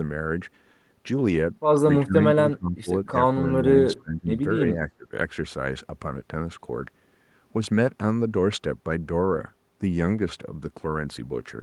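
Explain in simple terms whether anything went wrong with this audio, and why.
Between 2.0 and 5.1 seconds the speech dips or partly vanishes at 2.0, 2.5, 3.4, 3.9, 4.6 and 4.9 seconds, likely speech suppressed in double talk. Unlike network dropouts, some dips only soften the voice instead of silencing it.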